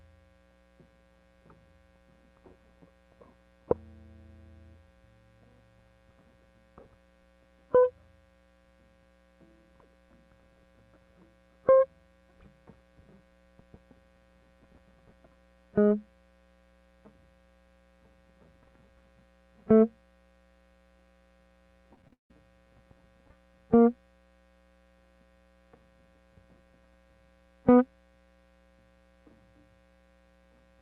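Repeated packet loss (robotic sound) hits this music clip from 21.94 to 22.31 s. Over that short stretch, six holes open in the stream, the longest about 169 ms, and each is papered over by stretching the preceding sound forward. With roughly 60% of the span made up of that recycled audio, the music turns choppy, with pieces missing. The call path's top end stops around 12 kHz, which fits a call codec.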